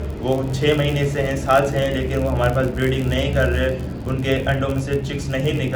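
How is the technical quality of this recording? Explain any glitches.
The quality is compromised by one fault, present throughout: the filter restarted on every block. Its state is discarded at each boundary, so every block opens with a small transient, producing an 86.1 Hz buzz that rises and falls with the signal's level and fits a 512-sample buffer. A waveform shows regularly spaced spikes; a spectrogram shows faint vertical lines repeating at that rate.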